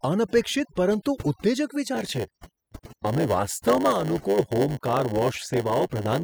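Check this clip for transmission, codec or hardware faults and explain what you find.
Two faults are present in this speech clip.

Overdone noise removal runs throughout. The noise reduction was set too aggressively, pulling individual frequency bands down whenever they sat near its noise estimate, so quiet parts of the voice vanished with them. The background drops and breaks up into twinkling specks.

Block size mismatch (padded) starts at 1.94 s, right after "અનપેક્ષિત પરંતુ ઉત્તેજક", and continues to the end. One stage delivers shorter blocks than the next expects, and each shortfall is zero-filled. Those regular gaps produce a 100 Hz buzz, and the speech runs at 0.919 times normal speed with its timbre unchanged.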